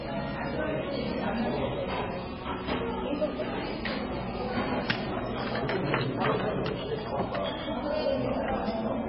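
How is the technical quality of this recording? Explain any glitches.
Technical quality is poor, with one fault running the whole way through: heavy MP3 compression. Everything is cut off above about 5.5 kHz, so the top end is simply gone and the audio sounds dull and boxed-in. The rest has that watery, swirly texture, with faint tones flickering in and out and transients smeared rather than crisp. That's likely a very low-bitrate MP3, something around 15 kbps, where the encoder lops off the treble and keeps dropping weak frequency detail frame to frame.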